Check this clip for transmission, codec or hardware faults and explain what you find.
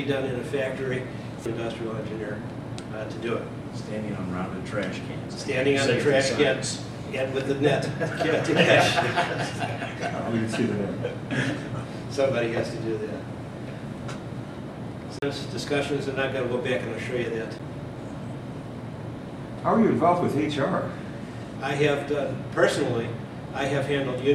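Three CD skips are audible. They occur at 1.45 s, from 15.19 to 15.22 s, and at 17.59 s. At each one, a knock or a flaw in the disc made the laser jump to another turn of the spiral. The player muted for roughly 3 ms, 40 ms and 10 ms respectively, then resumed from a different point. Each skip sounds like a tick or brief gap followed by an abrupt jump in the audio, forward or back, by one or more disc turns.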